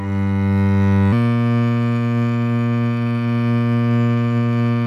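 From 1.12 s to the end, the music plays as a section at the wrong speed. It runs 1.2 times too fast. Pitch rises with it, by about three semitones, so everything sounds bright and hurried. The likely cause is playback against a mismatched clock.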